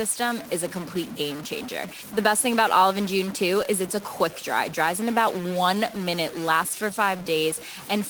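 Distortion sits on the speech from start to finish, and the pauses between phrases are filled with a gritty noise floor instead of silence. The likely cause is a stuck bit: one data bit held at a fixed value, throwing about half the samples off by that bit's weight.

Running through the whole clip is clock drift between sender and receiver. The sender's clock runs roughly 4 percent slower than the receiver's, so the jitter buffer keeps draining and the receiver has to fill the gap over and over.

From 0.29 s to 7.78 s those repeated timing corrections come through, if heard at all, as small, unevenly spaced hiccups and a slightly dragging, unsteady tempo. The speech plays at 96 percent speed, with short pieces repeated so that around 300 ms is added overall.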